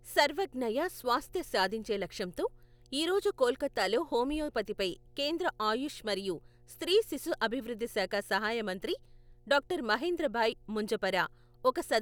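Mains hum runs throughout: power-line coupling adds a steady 60 Hz drone about 35 dB below the speech, drawn as an unbroken horizontal spectrogram line at 60 Hz.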